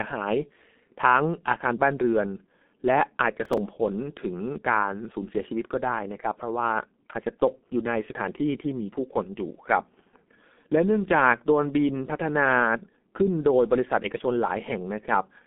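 From the start, the speech carries heavy G.723.1 codec damage: nothing above 3.8 kHz, a muffled, hoarse tone and smeared consonants from its slow 30 ms frame updates, which fits a rate near 6.3 kbit/s. Unlike plain band-limiting, the hoarseness comes from crude modelling, not just filtering.

From 3.45 to 3.58 s, processor overload crackle tears through the sound as a handful of buffers of roughly 5 ms each miss their deadline and replay stale audio with hard edges. Its gritty clustering over 0.12 s sets it apart from a single dropout click.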